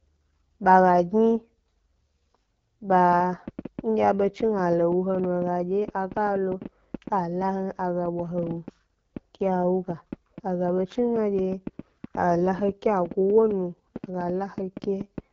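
From the start, the speech carries the sound of the AMR wideband (HD Voice) codec. Nothing reaches above about 7.2 kHz, and the top band sounds like hiss rather than real detail, because the codec rebuilds speech from a pulse-driven vocal tract model and fills its highest range with shaped noise. The damage is plainly audible, a rough, raspy texture that fits one of the lowest rates, around 8.85 kbit/s. Unlike ordinary low-pass filtering, the harm is to the grain of the voice, not just a loss of brightness.

From 3.13 s to 15.19 s a train of clicks runs over the audio, roughly seventy sharp ticks at about 5 per second, spaced unevenly, and peaking around 5 dB above the speech. They keep the same shape and carry on through pauses, which shows they are added on top of the signal rather than coming from the coding. That sets them apart from codec glitches or dropouts, which sit inside the speech itself. 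The likely cause is interference from nearby equipment or a faulty connection or power supply.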